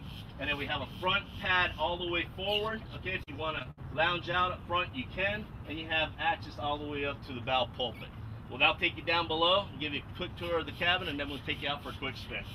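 From 3.23 to 3.79 s the sound breaks up with repeated packet loss, giving a choppy, robotic quality. Four dropouts fall within about half a second, the longest 64 ms, and each is bridged by stretching the preceding sound, so roughly a quarter of that span is concealment rather than real signal. On a spectrogram the stretch shows smeared, frozen horizontal bands with abrupt seams; the waveform shows short repeated cycles where detail vanishes.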